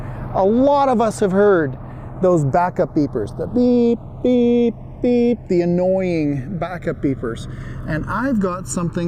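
A slow, swirling flanging runs through the whole clip, heard as notches gliding gradually across the spectrum when the two channels are summed to mono. This is the channels drifting apart: left and right were captured on separate clocks that disagree by something like 100 ppm, so the inter-channel delay keeps creeping, reaching roughly 0.7 ms by the end, and the comb filter it creates sweeps accordingly.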